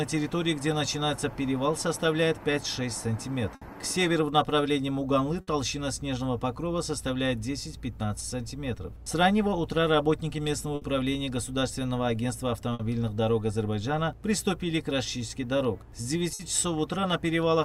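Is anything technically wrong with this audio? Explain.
Yes. At 3.55, 5.41, 10.75, 12.73 and 16.33 s the sound briefly freezes into a held, fading smear for about 60 ms and then jumps ahead. Each one is a burst of packet loss. Several packets in a row arrived too late or not at all, so the receiver filled about 60 ms by repeating and attenuating the last sound. Playback then resumed past roughly 60 ms of audio that never arrived.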